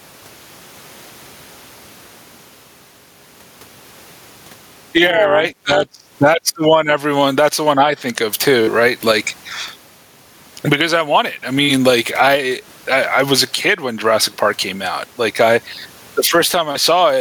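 Throughout the speech, the gain swings by around 20 dB, so loud and quiet passages sit squashed together. This is gain pumping, likely from input gain set far too high with a fast limiter clamping down on each peak.

From 5.06 to 5.96 s, just before "that's the one everyone", the speech takes on a metallic buzz with extra tones around it. This is overlap-add ripple: frames were rejoined with overlaps that don't sum evenly, so the level dips by about 11 dB once per frame, at around 200 Hz.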